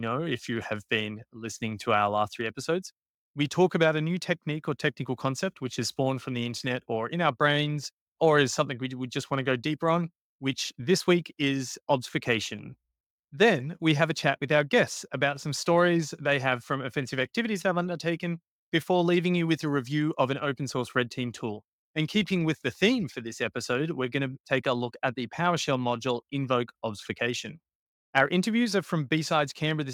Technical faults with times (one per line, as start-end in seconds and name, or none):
none